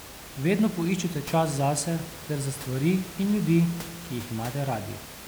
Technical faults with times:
none

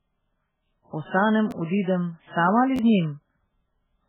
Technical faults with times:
0.00-4.09 MP3 compression
1.51 repeated buffer
2.76-2.79 repeated buffer

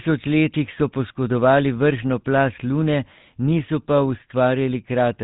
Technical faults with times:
0.00-5.23 GSM full-rate codec

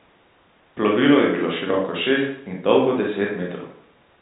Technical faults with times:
none

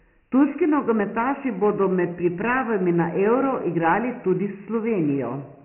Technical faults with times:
0.00-5.65 Dialogic VOX ADPCM

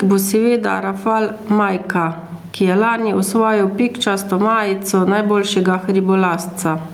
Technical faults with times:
0.00-6.93 gain pumping

